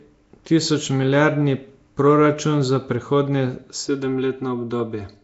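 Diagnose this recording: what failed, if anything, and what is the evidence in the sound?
Nellymoser compression, throughout: a plainly audible rough, hissy, smeared codec sound with nothing above 7.7 kHz, likely from Flash's block-based Asao codec filling starved bands with noise.

Channel delay (comb filtering), 3.88 s to the end: the sound turns hollow and phasey as one channel, lagging by about 3 ms, sums to mono, with the lowest notch near 150 Hz.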